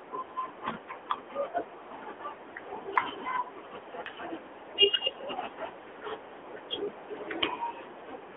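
From start to finish the speech sounds thin, boxed-in and buzzy, with a plainly synthetic, processed edge. Everything below about 300 Hz and above 3.4 kHz is missing. This is the AMR narrowband mobile codec (AMR-NB). It samples at 8 kHz and rebuilds speech from a vocal-tract model fed by a few pulses per short subframe. The damage level fits a 10.2 kbps mode, low enough that the modelling artefacts are clearly heard.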